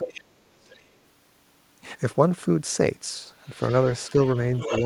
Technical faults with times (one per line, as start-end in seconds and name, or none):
0.00-0.71 speech suppressed in double talk
0.17-0.21 other side's voice leaking through
0.70-0.83 other side's voice leaking through
3.47-4.84 other side's voice leaking through
4.69-4.82 speech suppressed in double talk